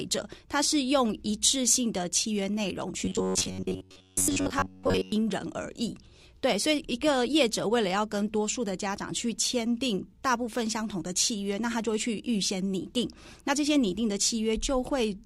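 Robotic sound from repeated short buffers runs from 3.05 to 5.12 s, where the audio collapses into a rigid, metallic buzz pitched at 93.8 Hz. That pitch matches a repeat period of about 10.7 ms. The likely cause is new audio arriving too slowly, so the playback side keeps recycling the last short buffer to fill the gap. Most of that stretch is repeated material rather than fresh sound, which is why it turns mechanical while only loosely tracking the original.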